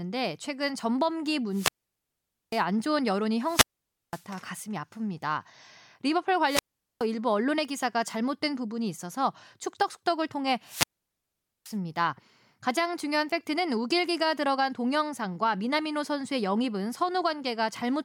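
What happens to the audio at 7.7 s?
Nothing goes wrong at 7.7 s; the speech runs through that moment intact, with no dropout, click or distortion.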